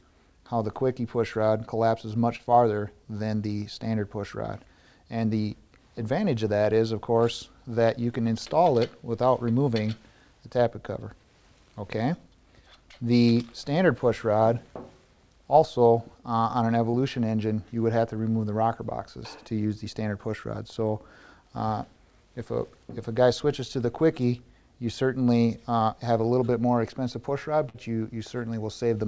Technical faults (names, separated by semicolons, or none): short concealed packet loss; burst of packet loss